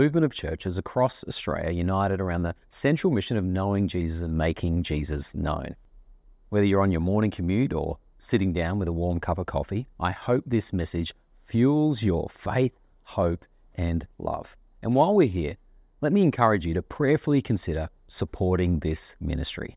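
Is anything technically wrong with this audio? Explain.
No, nothing technically wrong here.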